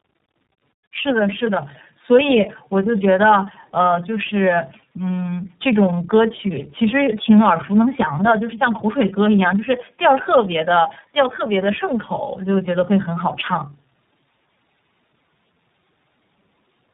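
Tandem speech coding runs through the whole clip. The speech passed through several low-rate speech coders in a row, the sound pointing to three, and each one decoded and re-encoded the output of the previous stage, stacking its losses on theirs. The speech sounds rough and warbly, with a muffled, band-limited quality: nothing is present above about 3.8 kHz, so sibilants and crisp consonant edges are missing.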